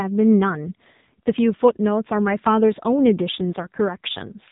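AMR narrowband mobile codec damage runs through the whole speech clip. Nothing above about 3.8 kHz survives, and the vocal-tract model, driven by sparse pulses, leaves the voice heavily buzzy and synthetic, which fits a low mode around 6.7 kbps.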